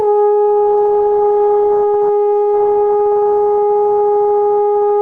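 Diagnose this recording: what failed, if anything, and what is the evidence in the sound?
A call bitrate drop runs from 0.67 s to 3.61 s, at the codec stage of the call chain. The music turns coarse and rough through that span, holds at its worst for about 2.1 s, then clears again. The degradation fits the encoder being pushed from about 32 kbps down to 18 kbps after the call's bandwidth estimate fell. With fewer bits, Opus quantises the spectrum more crudely, leaving a grainy, smeared texture until the rate recovers.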